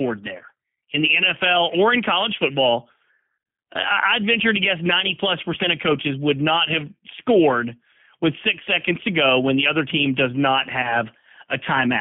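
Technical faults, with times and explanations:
Throughout: G.729 codec at 8 kbit/s, low-rate model-based speech coding within a 150 Hz to 3.4 kHz line band, leaves the speech plainly rough, slightly synthetic and muffled.
0.37 to 0.42 s and 10.82 to 11.02 s: VoIP packet loss concealed by the speech codec, a 20 ms gap filled from the last frame, smears into a buzzy or noisy fade, before "in the" and after "other team does not".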